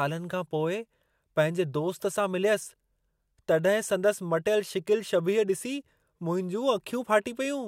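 No technical faults can be heard anywhere in the speech recording; the signal holds steady throughout with nothing in it that points to a problem in the recording or transmission chain.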